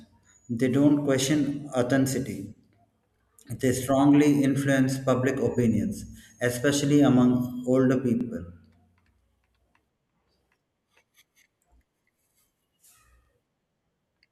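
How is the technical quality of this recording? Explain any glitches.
The recording has a recurring join fault: overlapping chunks at 3.16 s, 8.21 s and 13.25 s. The speech was cut into 5-second chunks, and each new chunk began 44 ms before the previous one had finished, so that slice is played twice at every boundary. At each of the three points you hear a brief stutter or click as that sliver of speech repeats, evenly spaced about 5 seconds apart.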